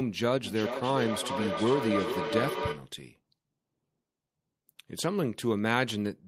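From 0.44 to 2.94 s, feedback echo between two devices loops the speech through a second microphone roughly every 0.4 s, peaking about 3 dB below it. The spectrogram shows evenly spaced copies.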